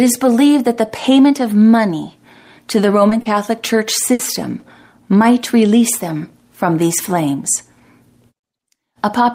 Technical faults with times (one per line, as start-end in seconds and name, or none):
3.09-3.27 short concealed packet loss
4.13-4.21 burst of packet loss